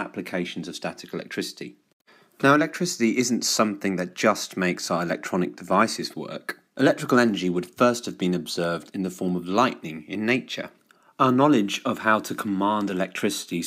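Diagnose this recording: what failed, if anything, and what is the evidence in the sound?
Nothing failed; no fault is audible anywhere.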